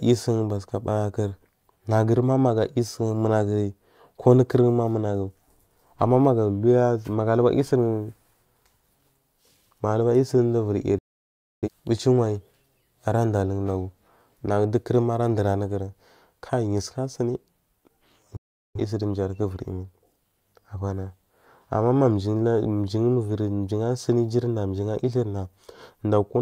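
A speech recording with two digital broadcast dropouts: the receiver lost valid frames and muted, so the audio drops out almost instantly and returns later, with the missing speech gone. The first runs from 10.98 to 11.69 s and the second from 18.37 to 18.80 s.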